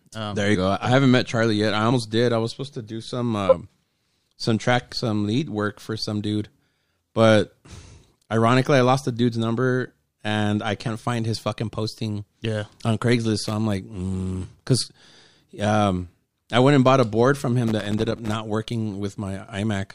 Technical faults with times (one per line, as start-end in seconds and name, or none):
1.91-1.93 compressed frames skipped
3.48-3.53 compressed frames skipped
5.44-5.47 compressed frames skipped
13.44-13.53 loose connector crackle
17.67-18.35 loose connector crackle